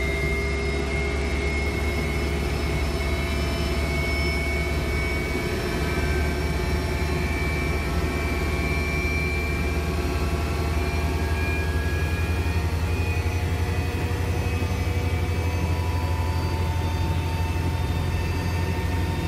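From 0.43 s to 1.66 s a Bluetooth SBC bit pool drop sets in: the link congests and the encoder starves its bits, consistent with the bit pool falling from 28 to 14, near 108 kbps. The treble goes dull and a gritty, grainy noise rides on the audio until the rate recovers. On a spectrogram the energy above the upper sub-bands vanishes abruptly across that span, with speckled quantisation noise filling the remaining bands.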